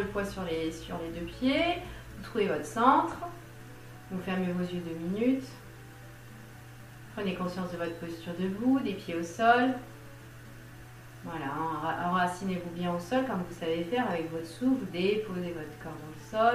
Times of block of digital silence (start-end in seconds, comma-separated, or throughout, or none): none